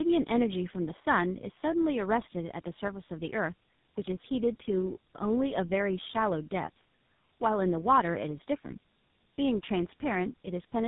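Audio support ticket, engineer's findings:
Tandem speech coding, whole clip: rough, muffled, warbly speech. Points to about three speech coders in series, last likely GSM full rate, each re-coding the previous one's damage. Spectrogram: hard ceiling near 3.8 kHz, smeared, blotchy harmonics.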